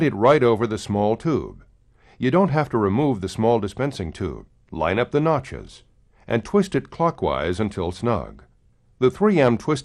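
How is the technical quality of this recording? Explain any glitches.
No glitches or faults heard.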